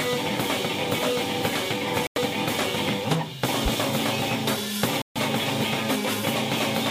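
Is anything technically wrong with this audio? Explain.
Yes. The music drops abruptly into silence from 2.07 to 2.18 s and from 5.02 to 5.18 s: corrupt frame muted, where the decoder rejected damaged compressed frames and the player filled those gaps with silence.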